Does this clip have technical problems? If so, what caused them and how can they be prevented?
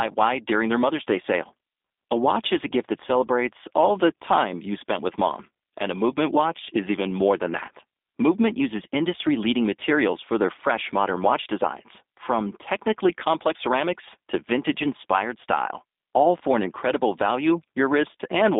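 Yes. Throughout the speech the sound is narrow and telephone-like, with nothing above about 3.7 kHz and little below 250 Hz, and it carries a plainly audible rough, slightly synthetic edge. This is G.729 codec damage, consistent with an 8 kbit/s stream. The codec rebuilds each 10 ms frame from a modelled vocal tract filter, a pitch predictor and a few sparse pulses, so fine detail is lost. To prevent it, record or transmit through a wideband, higher-bitrate codec instead of G.729.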